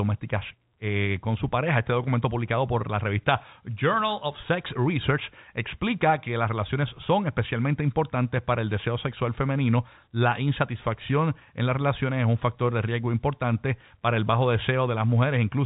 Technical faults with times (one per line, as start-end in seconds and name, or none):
none